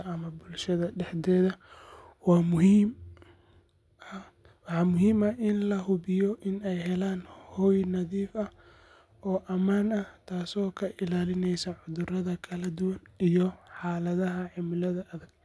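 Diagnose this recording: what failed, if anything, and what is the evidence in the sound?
Nothing failed anywhere in the chain for this recording. No moment in the speech points to a broken stage, so there is nothing to diagnose.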